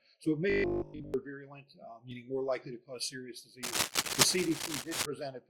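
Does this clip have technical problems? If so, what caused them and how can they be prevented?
Yes. From 0.50 to 1.14 s there is robotic sound from repeated short buffers: a rigid 50 Hz buzz, likely from late audio being filled by repeating 20 ms chunks, with most of the real sound skipped. Larger jitter buffers and steady data delivery prevent it.

Overlap between stream segments causes tiny skips at 2.11 s and 4.10 s, where the player trims audio at 2 s segment boundaries and the waveform jumps. Accurate segment timestamps prevent this.

Cable scratch noise from 3.63 to 5.06 s adds uneven rustling bursts about as loud as the sound itself, likely from a worn cable or connector being moved. Replacing or securing worn cabling prevents it.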